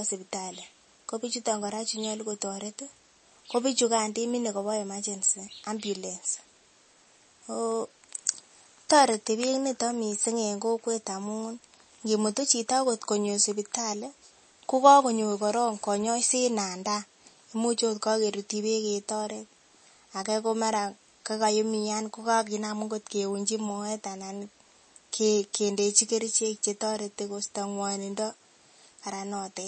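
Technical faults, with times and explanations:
Throughout, MP3 compression: the speech has nothing above 8.4 kHz and plainly audible codec damage, likely from MP3 encoding at a low bitrate, around 32 kbps. With so few bits, the encoder drops everything above a fixed treble limit, which dulls the s sounds. It also zeroes weaker frequency lines, and they flicker on and off from frame to frame, giving the speech a thin, watery texture.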